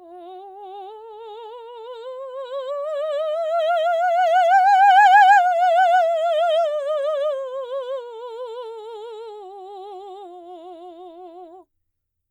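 Throughout the music, sample clock jitter: the converter's clock wanders by around a microsecond, so each sample lands slightly early or late. The timing error sits roughly 45 dB below the music, heard as a faint hiss and roughness that swells on loud, bright passages and disappears in silence.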